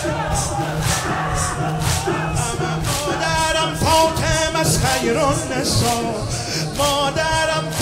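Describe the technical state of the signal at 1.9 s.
At 1.9 s a steady ticking runs about ten times a second, roughly 20 dB below the sound. This is Wi-Fi interference, present from 0.0 to 2.0 s: a nearby radio's beacon, repeating every 102.4 ms, is rectified by the audio circuit and heard as clicks.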